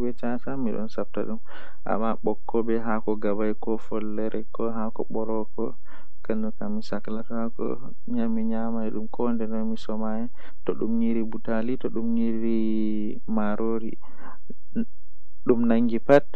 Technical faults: DC offset; damaged data in a compressed stream

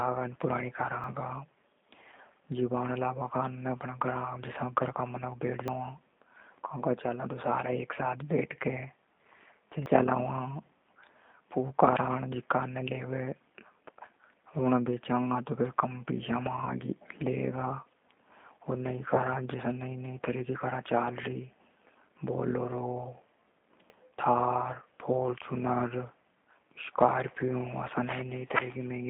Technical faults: G.729 codec; dropped buffer (overrun); VoIP packet loss concealed by the speech codec

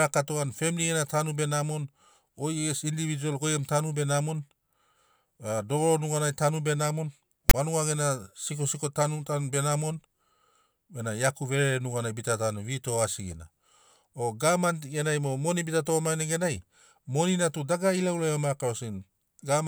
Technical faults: file tags played as audio

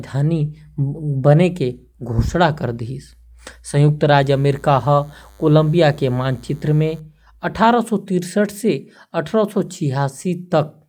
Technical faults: DECT cordless phone buzz

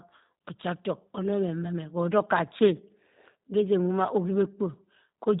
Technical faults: G.729 codec

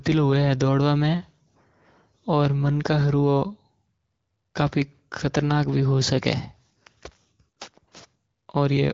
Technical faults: none

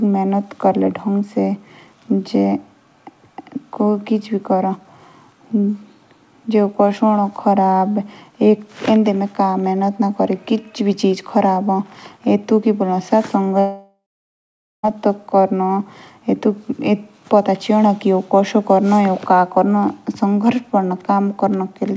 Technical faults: long network dropout

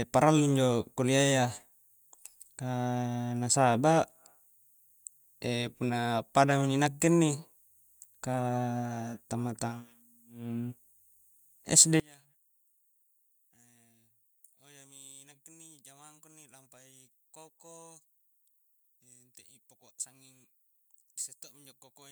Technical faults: one channel inverted

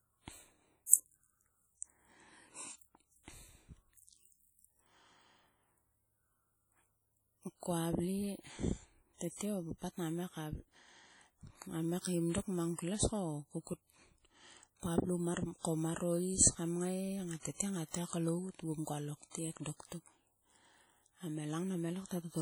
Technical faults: WMA compression

